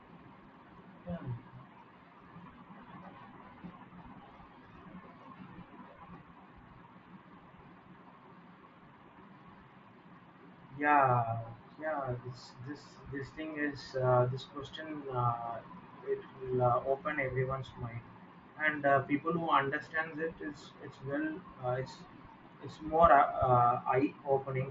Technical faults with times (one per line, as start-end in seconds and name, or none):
none